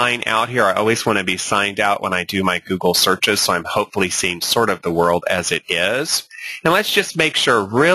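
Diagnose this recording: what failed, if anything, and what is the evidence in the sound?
Gain pumping runs through the whole recording. The gain swings by around 15 dB. Dynamics sound squashed. The likely cause is input gain set far too high, with a fast limiter or compressor in call processing clamping each peak.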